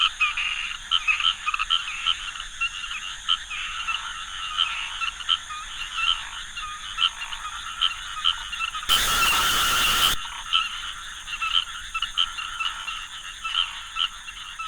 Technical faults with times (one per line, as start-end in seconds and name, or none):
8.89-10.14 stuck bit